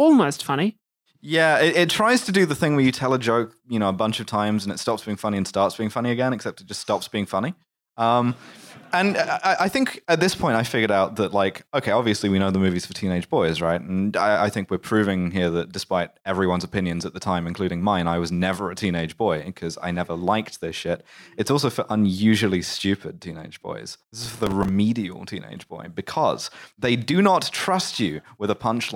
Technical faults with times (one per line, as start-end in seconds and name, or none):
23.94-24.69 processor overload crackle